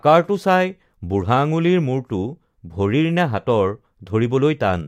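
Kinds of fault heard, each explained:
No technical faults are audible.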